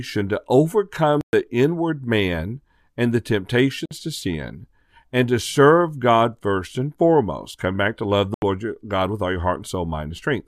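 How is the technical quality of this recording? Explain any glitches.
The recording has three short gaps in the speech: at 1.21 to 1.33 s (about 120 ms), 3.86 to 3.91 s (about 53 ms), and 8.34 to 8.42 s (80 ms). Each is a silent hole that cuts in and out sharply or with a brief few-millisecond fade. The speech resumes further along, as though it had kept playing. This is likely a Bluetooth dropout, where packets arrived too late and were discarded. On a waveform each gap is a flat stretch, and on a spectrogram it is a blank vertical band across all frequencies.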